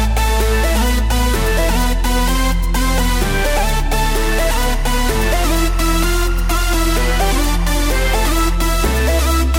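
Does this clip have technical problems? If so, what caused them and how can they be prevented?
Yes. Linear timecode at 24 frames per second leaked in from a neighbouring track or cable, causing timecode bleed from 4.20 to 8.55 s: a chirping warble switching between roughly 1 and 2 kHz, about 20 dB below the sound. Shielded, separately routed timecode lines prevent this.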